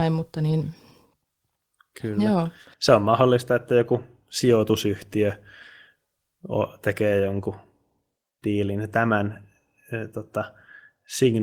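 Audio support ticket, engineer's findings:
Listened through the speech clip in full and nothing stood out; no issues to log.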